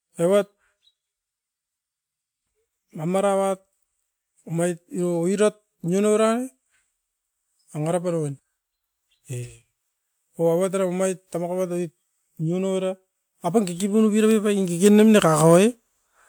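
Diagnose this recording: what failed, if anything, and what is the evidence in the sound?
Nothing failed; no stage in the chain shows faults.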